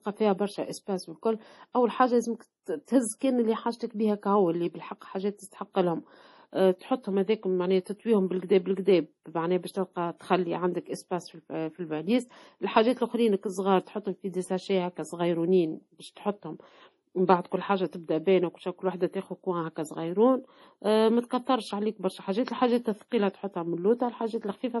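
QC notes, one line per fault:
Throughout: low-bitrate audio saved at a high bitrate. The speech has nothing above 11.5 kHz, and the band below carries the smeared, watery texture of heavy MP3 data reduction, which points to a source encoded at around 32 kbit/s. The likely cause is that this material was re-encoded as MP3 at a high rate, around 320 kbit/s. The second pass cannot restore the missing top end or the detail discarded the first time, so the earlier cut-off and artefacts remain in the larger file.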